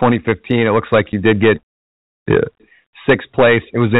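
Hard clipping runs through the whole recording: the speech is driven about 10 dB beyond what the chain can pass, so the loudest peaks, a few percent of the waveform, are sliced flat. Those squared-off tops produce a gritty crackle that lands on the peaks. This sets it apart from soft saturation, which rounds peaks into a warmer thickening. The hard edges here add a brittle fizz, held below 4 kHz by the telephone band of the G.711 coding.

At 1.12 s, between "looks like" and "you did get", comes packet loss filled with silence. A 10 ms stretch drops to silence, which points to a single lost packet replaced by nothing. The sound stops and restarts abruptly. Because the gap is true silence rather than a smoothed or repeated fragment, it is a hard hole, unlike concealment, which would smear or echo the preceding sound across the gap.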